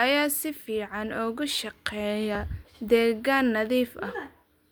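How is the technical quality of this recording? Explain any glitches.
There's one glitch worth flagging, at about 2.35 s. It's damaged data in a compressed stream: a tiny stretch of the encoded bytes got corrupted, so the decoder couldn't make sense of that frame, lost its place and had to hunt for the next valid frame header before carrying on. What you hear is a very brief glitch, only a few milliseconds long, breaking into the speech before things pick back up.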